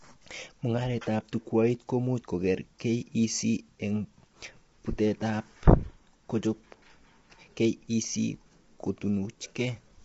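Low-delay AAC compression runs throughout the speech: the voice is rough and grainy, with noise filling the gaps between harmonics and nothing above 7.7 kHz. The likely cause is AAC-ELD's short frames starved of bits, which fits a rate near 24 kbps.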